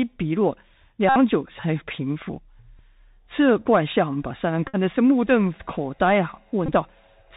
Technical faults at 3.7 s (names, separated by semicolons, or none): Bluetooth CVSD headset codec